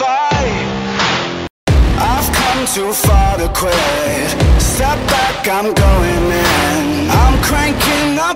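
From 0.0 to 1.67 s, dull sound from likely an input switched to a poorer device: spectrogram blank above 7.2 kHz, waveform about 5 dB lower, then a 200 ms gap.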